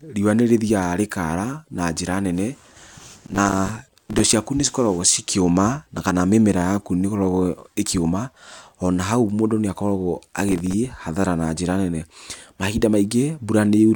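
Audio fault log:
3.26–4.33 s: processor overload crackle. A gritty tearing rides on the speech as dozens of missed buffers, each a few milliseconds long, drop to silence.
10.49–10.74 s: processor overload crackle. A shorter burst of crackle, where the processor again misses a run of tiny buffers and each leaves a hard-edged gap.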